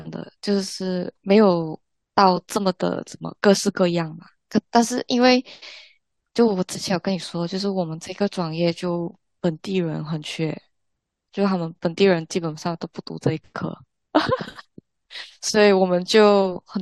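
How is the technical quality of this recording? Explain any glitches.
There's one glitch worth flagging in this speech recording. At 2.33 to 2.37 s you get compressed frames skipped: a chunk of encoded audio either went missing or the decoder rejected it as damaged, so playback jumps ahead by roughly 20 ms.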